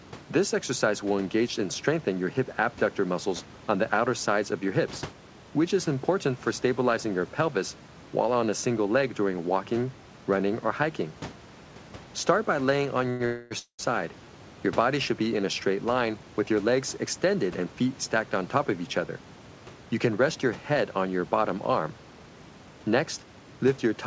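Around 13.10 s there's a short stall from a late packet. A packet missed its slot, the jitter buffer ran dry, and the receiver held the last bit of sound for roughly a tenth of a second (about 97 ms) until the packet showed up, then carried on from the same spot. Nothing gets lost; you just hear a sound drawn out a touch too long with a faint buzzy edge, ending near 13.22 s.

Right after come two call audio freezes, from 13.26 to 13.53 s and from 13.59 to 13.81 s. They sound like the last sound turning into a fading buzz, with the second one trailing off into about 100 ms of silence before things resume. The likely cause is a run of packets held up in transit, leaving the jitter buffer empty. That stretches the timeline by about 251 ms and then another 200 ms, but no audio goes missing. All of this sits over a band-limited call sound with nothing above 8 kHz, consistent with G.722 at 64 kbps, and a low room noise about 23 dB under the speech.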